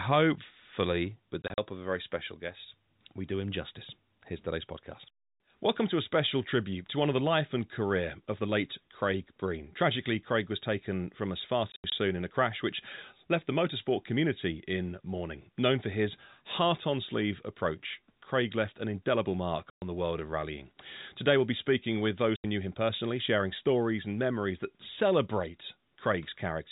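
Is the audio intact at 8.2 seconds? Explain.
Yes, the audio is intact at 8.2 seconds, with the speech carried through G.711 telephone coding and nothing above 4 kHz, as a fixed-line call would sound.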